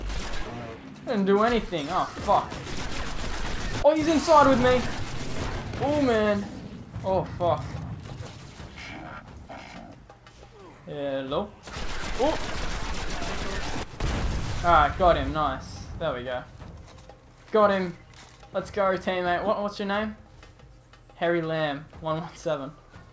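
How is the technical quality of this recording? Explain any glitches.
No glitches are present; the band stops at 8 kHz, which fits a wideband call codec such as G.722 on a normal call path.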